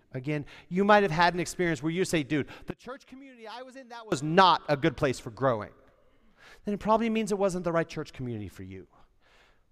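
From 2.71 s to 4.12 s, right after "where you say dude" and ending before "not a good place", the speech drops by about 23 dB for roughly 1.4 s, leaving only a faint copy. The likely cause is one channel inverted: summed to mono, the shared centre cancels, leaving only the small difference between channels. Unlike a plain gain dip or dropout, the residue is what differs between the channels.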